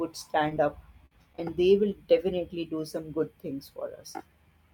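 Twice in quick succession, at 0.49 to 0.53 s and 0.55 to 0.58 s, short concealed packet loss occurs: a 20 ms packet fails to reach the decoder in time, and the receiver patches the hole by extending the preceding sound for about 13 ms before blending back into real audio. Each event is heard as a fleeting smear or wobble in the speech.

From 1.06 to 1.13 s a burst of packet loss removes about 40 ms of consecutive audio. The receiver keeps the last sound going for about 48 ms while fading it down, so a voiced stretch turns into a held, decaying buzz and an unvoiced one into a dying hiss. The speech then picks up further along, with the lost section absent.

Two more short concealed packet losses follow back to back, at 1.33 to 1.36 s and 1.36 to 1.40 s, each a missing 20 ms packet bridged by about 10 ms and then 22 ms of continued sound. Each is heard as a brief smear or wobble.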